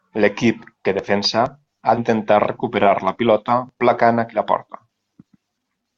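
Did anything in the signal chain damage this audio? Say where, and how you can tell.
Yes, at the codec stage: compressed frames skipped. The speech jumps ahead at 1.97 s, losing about a tenth of a second, and at 4.33 s, losing a few tens of milliseconds. Both fit whole 20 ms frames dropped.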